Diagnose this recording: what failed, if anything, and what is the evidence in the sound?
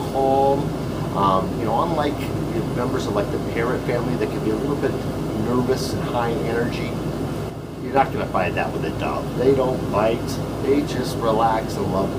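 At 7.5 s the whole sound drops abruptly by about 6 dB, with the background noise falling in step, and it stays down until 7.96 s, when it snaps back to its earlier level. This is a sudden gain jump in the digital processing stage. The likely cause is a gain change applied between one sample and the next with no ramp. A drop of about 6 dB fits a one-bit shift, which halves the signal.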